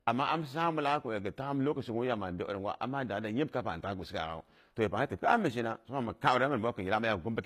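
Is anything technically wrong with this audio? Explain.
Yes. Throughout the speech there is low-bitrate audio saved at a high bitrate. Nothing is present above 14.9 kHz, and the artefacts of the earlier encoding remain. This likely comes from a very low-bitrate HE-AAC encode later re-saved as high-bitrate MP3, which cannot restore the lost detail.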